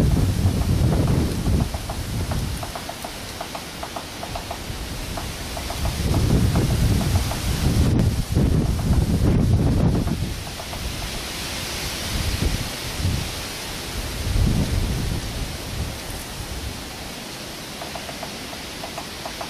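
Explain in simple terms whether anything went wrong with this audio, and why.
Overlap between stream segments, at 2.06 s and again at 7.99 s. The audio arrives in 2-second chunks, and twice two chunks claimed the same few milliseconds, so the player cut that sliver away. The sound jumps, heard as a tiny click or skip.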